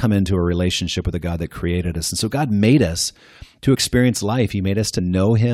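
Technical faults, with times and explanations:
3.74 s and 4.98 s, compressed frames skipped: right after "made us to" the sound jumps ahead by about one 21.3 ms frame, then later by about two (roughly 40 ms), because those coded frames were missing or rejected as damaged. Overlapping neighbour frames smear each join into a soft blip rather than a click.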